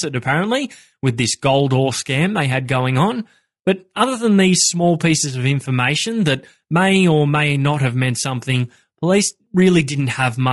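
The clip is speech, and it carries low-delay AAC compression from start to finish. The damage is plainly audible. The voice sounds rough and grainy, with noise filling the gaps between the pitch harmonics. The top band sounds thinned or synthetic. The likely cause is AAC-ELD, the low-delay codec of video calls, at a rate that fits about 32 kbps. Its short frames resolve the harmonics coarsely, and at this low rate few bits remain for fine detail.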